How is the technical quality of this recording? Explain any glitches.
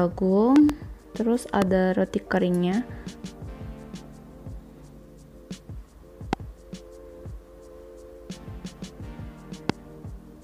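Loud pops are the main problem: a double pop at 0.56–0.72 s, then single pops at 1.62–1.64 s, 6.33–6.35 s and 9.70–9.72 s. Each sharp thump jumps roughly 20 dB above the sound, which continues underneath. The likely cause is voltage spikes from a switch, connector or static discharge entering the signal path.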